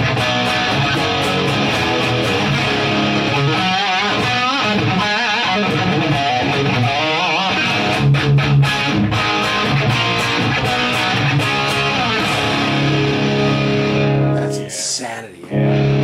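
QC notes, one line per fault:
Throughout: resampler restarted on every block. A steady 100 Hz buzz sits under the sound wherever signal is present, matching 10 ms blocks. Each block of the 48 kHz to 44.1 kHz conversion was converted in isolation, so every block edge lacks true neighbouring samples and carries a small error.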